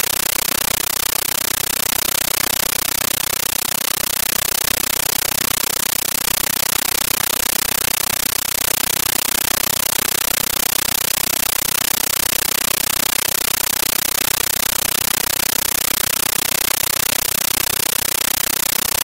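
Throughout, the sound is replaced by very loud, chattering static: a compressed stream played as audio. Bursts of noise about 13.3 ms long repeat 31.25 times a second with silence between them, which points to an undecoded 640 kbps AC-3 bitstream being passed as PCM samples.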